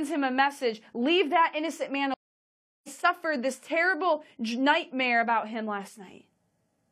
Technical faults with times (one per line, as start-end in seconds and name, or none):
2.14-2.89 stream reconnect